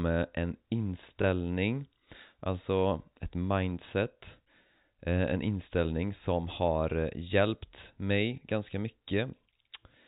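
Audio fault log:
1.22 s, packet loss with last packet repeated: a single 20 ms gap is filled by replaying the preceding stretch of audio, which fits one lost 20 ms packet concealed by repetition. The single repeat comes through as a small blip. The gap is too short for a sustained 50 Hz buzz to build up. The audio sits within the band-limited, below-4 kHz sound of G.711 telephone coding.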